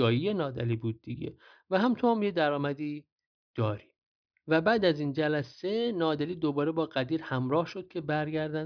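No technical faults can be heard anywhere in the speech.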